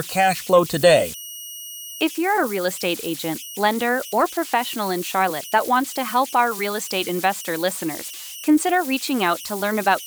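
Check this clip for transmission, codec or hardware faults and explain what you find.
There's one hardware fault here, and it runs the whole way through the speech: converter idle tones. A whistle sits around 3 kHz in the pauses, and a grainy texture clings under the speech, roughly 15 dB below the signal. That's a delta-sigma converter running without dither. With very little input it locks into repeating bit patterns, and those cycles come out as steady tones whose pitch follows the input's small offset.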